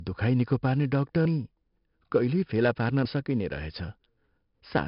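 This speech clip has heavy 4-bit ADPCM compression throughout: a gritty hiss rides every loud syllable, attacks sound rough, and nothing comes through above 5.3 kHz, which fits roughly 44 kbps. There are also two skips, at 1.25 s right after "दुखाइ निको पार्ने" and at 3.05 s, each dropping around a fifth of a second. Their 1.8-second spacing points to audio missing between chunks, likely lost as the recorder switched buffers.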